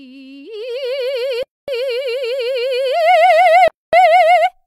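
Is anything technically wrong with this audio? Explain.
Yes. The music has a gap between chunks, heard twice: from 1.43 to 1.68 s and again from 3.68 to 3.93 s, each a silence of 250 ms. The holes recur exactly 2.25 s apart, pointing to audio delivered in 2 s pieces with silence inserted at each join. No music is missing: after each hole it resumes exactly where it stopped. That sets it apart from a dropout, where material is skipped.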